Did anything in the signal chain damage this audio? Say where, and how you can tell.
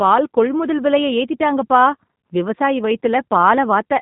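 Yes. Throughout the speech the sound is band-limited, with nothing above 4 kHz, and carries a slightly rough, synthetic buzz. That points to the codec stage: G.729 compression, which fits an 8 kbit/s stream, rebuilds each 10 ms frame from a vocal tract filter, pitch predictor and a few pulses.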